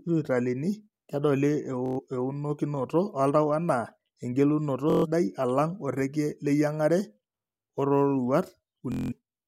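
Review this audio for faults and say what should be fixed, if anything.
Bluetooth stutter occurs at 1.86 to 2.00 s, 4.90 to 5.06 s just before "alang' oreikie", and 8.92 to 9.13 s. In each, packets arrived late or not at all, and the receiver kept replaying its last short slice of speech, producing a rapid machine-gun buzz. The speech then resumes further along, as if it had kept playing, so about 116 ms, 139 ms and 186 ms are lost, which points to several consecutive dropped frames each time. To prevent it, keep the devices close with a clear line of sight and away from congested 2.4 GHz traffic, or record over a wired connection.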